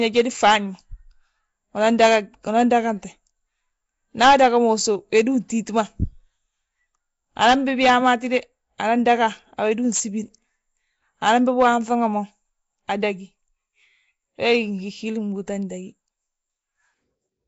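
Speech carrying Nellymoser compression damage throughout: a rough, hissy halo and smeared, underwater texture, likely from the Nellymoser Asao codec starving weak bands and filling them with noise. The damage is plainly audible, nothing sounds above 7.7 kHz, and the coarseness fits roughly 32 kbps.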